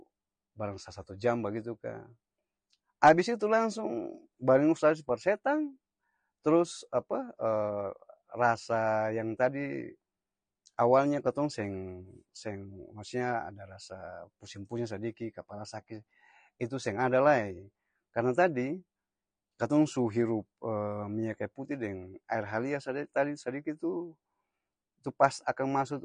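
Speech clip carrying plainly audible AAC compression damage from start to finish: the sound is dull and smeared, with a warbly, fizzy edge on sibilants. The likely cause is AAC-LC encoding starved of bits, which fits a bitrate around 32 kbps.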